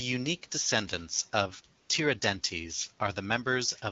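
At 1.81 s, just after "unique descendants of", the speech gives way to AMR comfort noise for 80 ms, until 1.89 s. The phone judged the talker silent and stopped sending speech frames, so the receiver filled the gap with smooth synthetic noise built from a rough level-and-spectrum description. Unlike a dropout, which leaves dead silence or a click, this pause is filled with a steady hiss. The surrounding wideband speech stays clear, consistent with AMR-WB at around 12.65 kbit/s.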